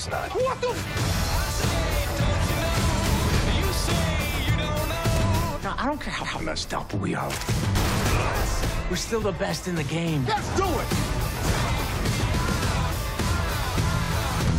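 Three short stutters from repeated frames: a chunk of the compressed audio gets decoded again, so the same slice plays twice back to back. At 1.17 s a 46 ms block repeats once, and at 6.24 s a longer 139 ms block repeats once. Near the end, at 14.04 s, a tiny 23 ms block plays three times in a row. Each repeat adds its length to the running time.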